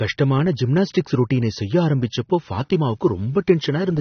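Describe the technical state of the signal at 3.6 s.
At 3.6 s the speech is dull and smeared, with nothing above about 6.3 kHz. A fizzy, warbling texture sits on sustained sounds and sibilants. The damage is plainly audible and runs through the whole clip, not just this moment. The likely cause is AAC compression, consistent with AAC-LC at a low bitrate near 24 kbps. The encoder lowers its cut-off and thins the spectrum to save bits, leaving holes that smear the detail.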